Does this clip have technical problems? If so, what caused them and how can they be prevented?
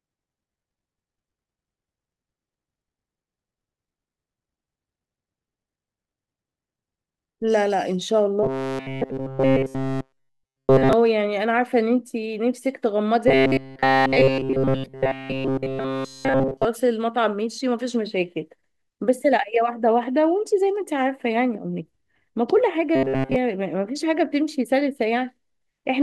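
Yes. Robotic sound from repeated short buffers occurs at 8.43–10.93 s, 13.28–16.65 s and 22.95–23.36 s. In each span the speech becomes a rigid metallic buzz pitched at 133 Hz, with essentially none of the real audio getting through. This is likely caused by audio arriving too slowly, so the playback side loops a fragment of about 7.5 ms, whose repetition rate sets the buzz. Larger buffering or steadier audio delivery prevents it.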